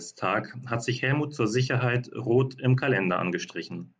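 Nothing in the speech stood out as a technical fault on listening.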